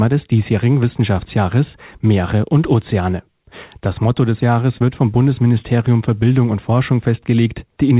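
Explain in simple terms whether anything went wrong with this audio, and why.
Across almost the whole clip, from 0.02 s to 7.92 s, the speech has a faintly uneven pace, with small hiccups where tiny slivers seem skipped. These are repeated timing corrections: the receiving end keeps trimming short pieces of audio so it doesn't fall behind. The trims always go the same way but aren't evenly spaced, so the rhythm wobbles slightly instead of flowing smoothly. Overall the speech plays at about 104% of its natural pace.

The underlying cause is clock drift between sender and receiver. Each device keeps time with its own clock, and here the sending side runs about four percent faster than the receiving side. Sound keeps arriving a little quicker than it can be played, so the holding area for incoming audio keeps overfilling. The receiver has to throw bits away now and then to catch up, which produces those hiccups throughout. 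The phone-like narrowness of the sound, with nothing above 4 kHz, comes from the ordinary call codec and not from this fault.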